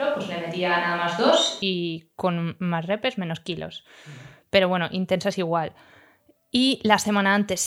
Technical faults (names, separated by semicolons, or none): switch to a distant microphone